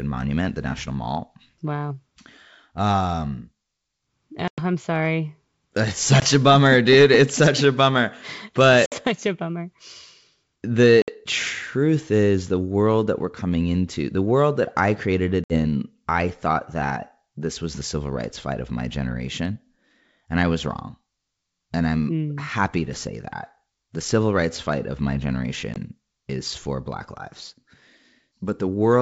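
Packet loss on an ADPCM call at 4.48 s (100 ms), 6.20 s (20 ms), 8.86 s (60 ms), 11.02 s (60 ms), 15.44 s (60 ms) and 25.74 s (20 ms) leaves hard-edged silent gaps in the speech. Afterwards the decoder's predictor and step size no longer match the sender's, so the speech returns with brief, slight distortion until it resynchronises.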